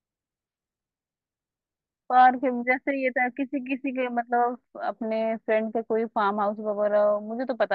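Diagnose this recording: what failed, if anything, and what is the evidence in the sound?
Nothing in the sound points to a failure at any stage, so there's honestly nothing here to diagnose.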